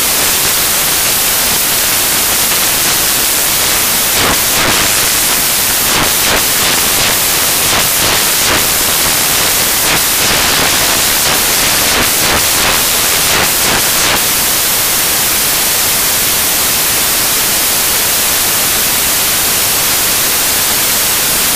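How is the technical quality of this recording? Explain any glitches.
The recording is badly damaged from start to finish by samples built from the wrong bytes. The reader assembles each sample's bytes incorrectly, so the rapidly fluctuating low-order bits land in the most significant position and dominate every value. The result is loud, harsh broadband noise covering the whole clip, close to white on the louder passages.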